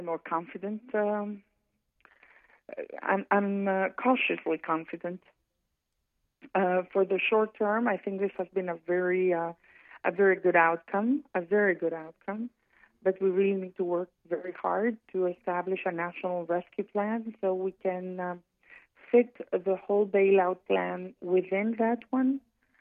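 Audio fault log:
Nothing stood out on a careful listen, and no fault was found to log.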